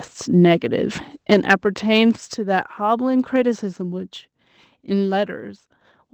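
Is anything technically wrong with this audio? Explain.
Yes, several faults can be heard in this speech.

Sample clock jitter runs through the whole clip. A faint hiss and roughness rides on the louder, brighter parts of the speech and fades away in pauses. The converter's clock wobbles by roughly a microsecond or two, so samples land slightly off time. Fast-moving waveform sections turn that timing error into noise about 45 dB below the signal.

At 1.34 s and again at 2.34 s the microphone volume is stepped down. Voice and background both drop abruptly, by about 4 dB the first time and about 5 dB the second. This likely comes from the call software judging the input too hot and lowering the device level in one jump.

Between 1.94 and 1.99 s there is microphone overload. A brief harsh, crackly edge appears on the loudest peak. The likely cause is input gain set high enough that the peaks exceed the converter's limit by about 1 dB, flattening a small share of the samples there. 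The second level drop follows shortly after.

The audio was carried over an Opus call path at 20 kbps, with content limited to about 8 kHz.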